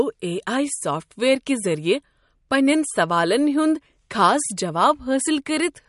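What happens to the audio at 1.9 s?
MP3 compression is likely behind what is heard at 1.9 s and throughout: nothing above 11.2 kHz survives, and the starved bit budget, fitting about 48 kbps, leaves a watery, swirly smear.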